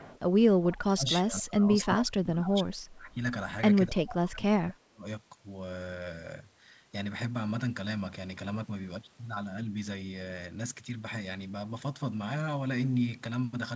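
From 0.00 to 0.19 s, and again briefly at 0.71 to 0.76 s, a faint delayed copy of the speech sits about 25 dB below the main talker, trailing it by 255 ms. This is an echo leak, likely from a far end on loudspeaker whose echo canceller let part of the returned signal through. Both scraps are short, heard as a quiet ghost behind the voice.

Between 0.49 and 3.17 s the talker's level drops, by as much as around 30 dB, for about two seconds in total across that span. A second stretch from 3.88 to 5.06 s dips by up to around 25 dB for roughly a second. This is speech suppressed in double talk: the echo canceller, likely unable to separate the near talker from loudspeaker echo while both sides were active, pulled the whole signal down, so the voice ducks. Throughout, the audio is band-limited to 8 kHz, which fits the G.722 call path.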